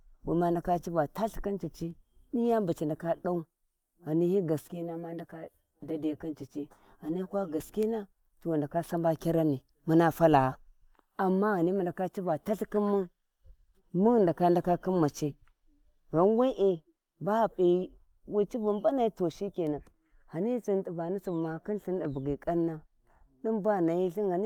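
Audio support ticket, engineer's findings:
Hollow, phasey speech from 4.61 to 7.60 s, then return to full sound. Channel delay (comb filtering): one channel lagging by around 10 ms, both summed to mono. Shared content cancels at regular intervals, first notch near 50 Hz, then every 100 Hz or so above. Check channel alignment and buffering ahead of the mono sum.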